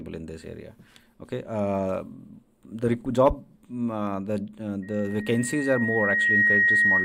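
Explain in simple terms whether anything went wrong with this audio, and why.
Yes, from 4.82 s to the end there is a loudspeaker feedback squeal. A microphone was picking up its own loudspeaker, so a 1.9 kHz tone looped around and grew louder over about a second and a half, ending well above the rest of the sound.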